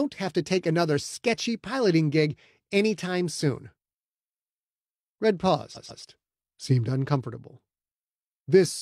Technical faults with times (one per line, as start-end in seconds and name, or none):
5.72-5.99 repeated frames